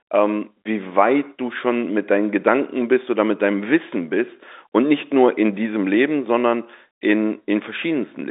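Nothing here calls for comment; the speech simply carries the narrow, phone-line character of G.711 telephone coding, with nothing above about 3.8 kHz.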